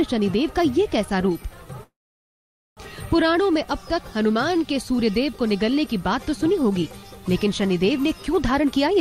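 At 1.83 s the audio stops moving forward. A short tail of the last sound continues, fades, and then about 860 ms of silence follows. The sound picks up again at 2.80 s exactly where it left off, so nothing is lost. This is a call audio freeze, likely caused by packets held up in transit until the jitter buffer ran dry. The 934 ms pause adds that much delay to everything after it. From 8.54 s to the end at 9.01 s, a jitter buffer speed-up is heard. The audio plays at 112% of normal speed with no pitch change, so it sounds hurried. The receiver drops many tiny pitch-period slices in a row, roughly 70 ms in total. This trims excess delay held in the buffer.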